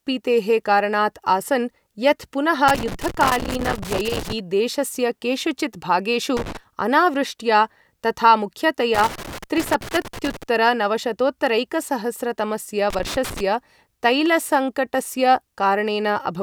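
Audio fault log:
2.68–4.39 s, 6.37–6.57 s, 8.95–10.43 s and 12.90–13.41 s: loose connector crackle. A worn or dirty contact keeps making and breaking as it shifts, chopping the speech, so you get ragged scratchy bursts. The first comes just after "यत् पुनः", and the second sits between "केषुचित् भागेषु" and "अनावृष्ट्या तथा".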